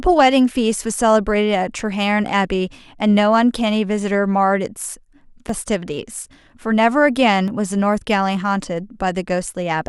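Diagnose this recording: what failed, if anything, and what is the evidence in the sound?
Overlap between stream segments is the fault, at the streaming and playback stage where consecutive segments are joined. Two tiny skips in the speech, at 5.49 s and 7.48 s, are points where 4 and 14 milliseconds of audio are missing and the waveform jumps. Their roughly 2-second spacing matches a 2-second segment length: misaligned timestamps make the player trim audio that was never actually duplicated. Packet loss would instead leave a gap, a fill, or concealment smearing.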